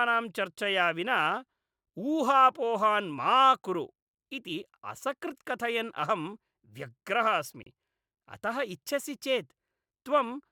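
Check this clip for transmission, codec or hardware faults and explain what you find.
One transmission fault turns up in this speech recording. It is a gap between stream segments, at 7.63 to 7.66 s. The sound cuts to silence for about 32 ms, with hard edges on both sides. The timing fits a boundary between 4-second segments. Their timestamps leave a small hole, and the player fills it with silence. Nothing is lost. The audio after the hole simply arrives 32 ms late.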